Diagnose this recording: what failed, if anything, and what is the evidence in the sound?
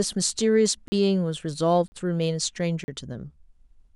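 The driver or buffer stage failed, leaving a block of digital silence three times in this speech: 0.88–0.92, 1.88–1.92 and 2.84–2.88 s, each 40 ms. Abrupt cut-outs and returns, with no fade or concealment fill, mark buffer underruns rather than network packet loss.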